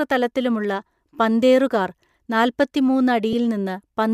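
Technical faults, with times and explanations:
3.33 s, lost LE Audio frames: the Bluetooth link briefly dropped data, consistent with one missing 7.5 ms frame. The LC3 decoder filled the gap by repeating the previous spectrum with randomised signs, so the speech blurs momentarily into a noisy smear.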